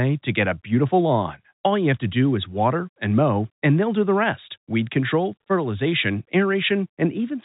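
No technical fault can be heard in this speech clip. It comes through G.711 telephone coding, so the sound stops short at about 3.8 kHz, and a faint quantisation hiss rides along at a level that follows the speech.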